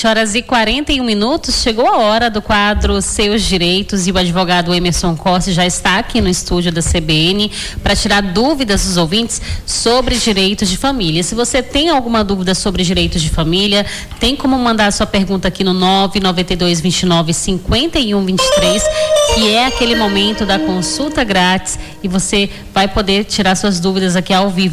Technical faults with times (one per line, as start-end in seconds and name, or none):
none